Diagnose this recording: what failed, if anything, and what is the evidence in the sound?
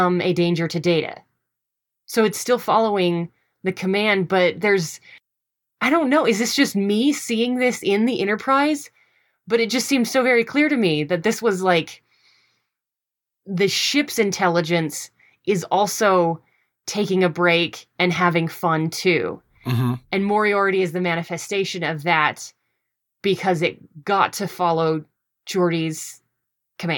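Nothing failed here: I can hear no fault at any stage, from the wiring through to playback. There is no event at any point in the speech to place in time and no mechanism to diagnose.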